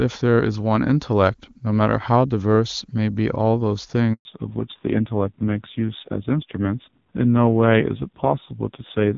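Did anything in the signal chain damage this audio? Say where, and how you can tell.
Yes. At the network stage, a handover gap cuts the speech from 4.13 to 4.25 s. The sound drops out cleanly for 120 ms, which fits the call switching between networks with no frames delivered until the new link came up.

At the codec stage, there is a fallback to narrowband from 4.25 s to the end. Content above 4 kHz disappears and the speech turns dull and rough, unlike the clear HD Voice before the gap. This points to a low-rate narrowband mode, around 5.9 kbit/s.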